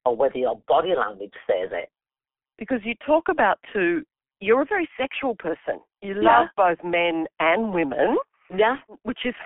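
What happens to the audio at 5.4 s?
At 5.4 s the speech is passing through G.723.1 codec damage, which runs through the whole clip. The codec codes the sound in 30 ms frames and updates its voice model slowly, so fast changes get smeared. The damage is heavy and fits a rate near 6 kbit/s. Nothing above 3.5 kHz survives, and the line band sits at about 250 Hz to 3.4 kHz. The speech sounds muffled and hoarse, with blurred consonants.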